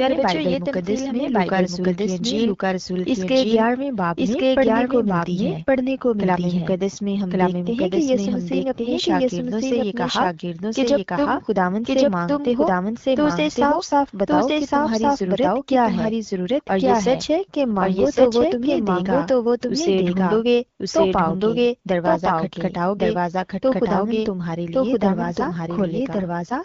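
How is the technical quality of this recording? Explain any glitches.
The recording has two problems: the whole clip is heard twice, out of step, and the sound briefly turns rougher twice near the end.

Doubled audio track, throughout: a second full-band copy runs about a second behind the original at roughly the same level, with no decay or room colour. That likely comes from a second, slower capture path or an edit holding two offset copies, so every sound gets a hard echo.

AMR rate drop, 17.43 to 18.70 s and 25.25 s to the end: a weak radio link pushes the AMR wideband codec to a lower rate, spending bits on error protection. The band stays the same with no gap, but speech grows rougher and more synthetic, which fits a fall from 12.65 to 8.85 kbit/s.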